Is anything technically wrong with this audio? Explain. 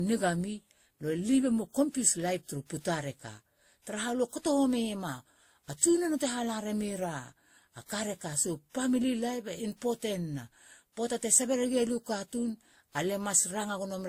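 Yes. Transcoding between lossy codecs runs throughout the speech. Nothing is present above 16.5 kHz, and several kinds of compression smear and swirl sit on top of one another rather than a single codec's signature. This is likely the result of passing through three encoders in turn, which fits Vorbis and Opus at around 48 to 49 kbit/s followed by WMA at about 64 kbit/s. Each later stage spent bits re-encoding the earlier damage and added its own, while the lowest cut-off stayed.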